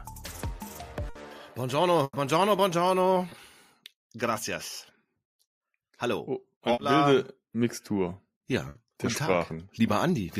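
At 1.09 s the sound freezes into a held, fading stretch for about 60 ms before jumping ahead. This is a burst of packet loss: consecutive packets arrived too late or not at all, so the receiver extended the last sound and lowered its level, and 60 ms of audio is simply gone. At 2.03 to 2.15 s a longer burst does the same for about 100 ms, with 30 ms of silence inside the gap.

Around 3.29 s there is a brief smear lasting about 20 ms, and at 6.73 to 6.79 s a slightly longer wobble of about 40 ms. Both are short concealed packet loss. A few hundredths of a second never reached the decoder in time, so the receiver continued the preceding sound and blended back into the real signal, leaving only a momentary blur where the audio was replaced.

At 8.69 s a third burst of packet loss repeats the first. The sound is held and fades for about 60 ms, and the audio resumes with that 60 ms missing.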